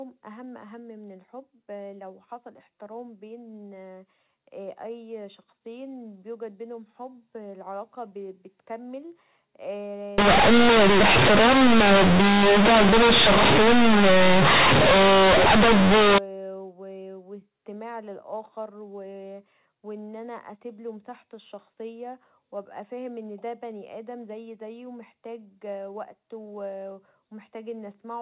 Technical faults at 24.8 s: none

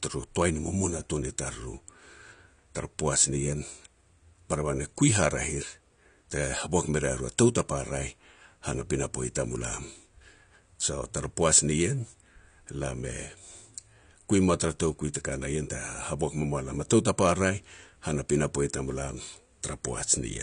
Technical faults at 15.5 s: AAC compression

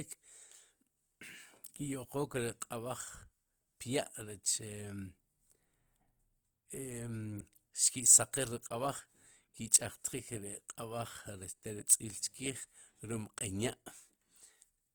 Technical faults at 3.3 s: Opus compression

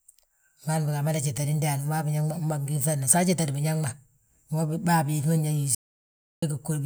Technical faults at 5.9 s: audio dropout to silence

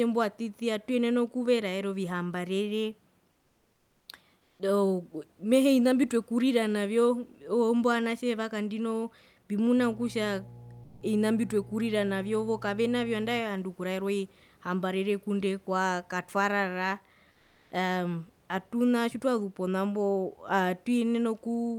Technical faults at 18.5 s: none

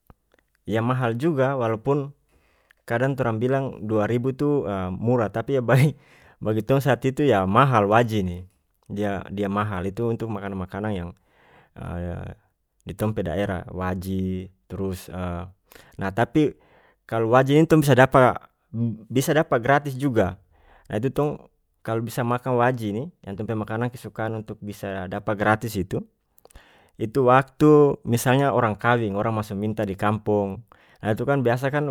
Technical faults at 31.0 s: none

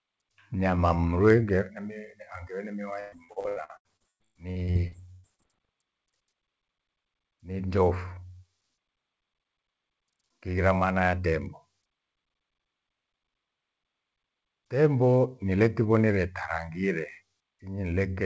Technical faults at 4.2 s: repeated packet loss (robotic sound)

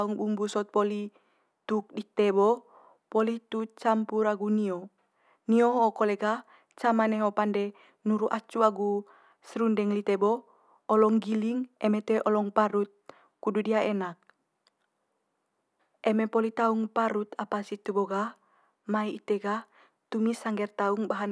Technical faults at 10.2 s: none

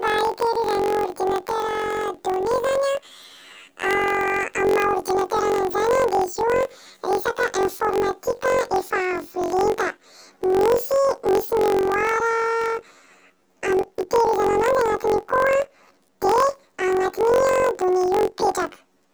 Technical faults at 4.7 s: planar audio read as interleaved

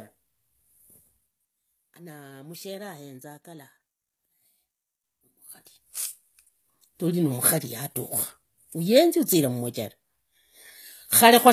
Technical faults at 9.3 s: HE-AAC compression

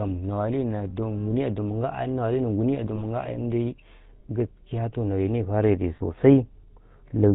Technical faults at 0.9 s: GSM full-rate codec; lost GSM frames

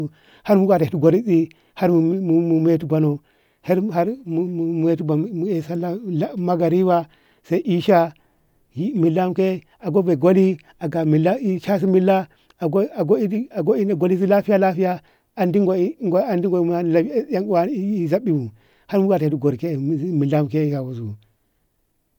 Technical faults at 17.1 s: none

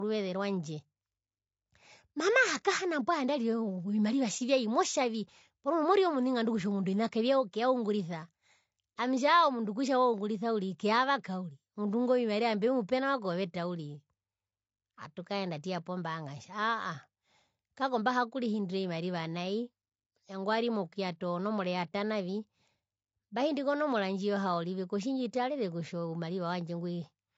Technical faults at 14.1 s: low-delay AAC compression

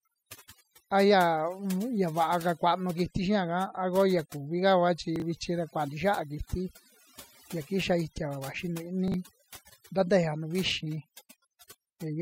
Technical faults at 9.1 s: overdone noise removal; chunks out of order

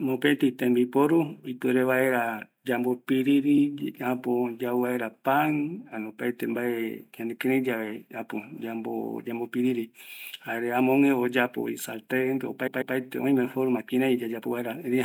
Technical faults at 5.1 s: none

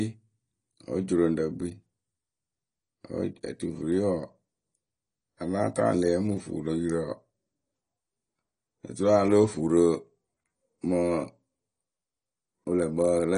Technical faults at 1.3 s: AAC compression

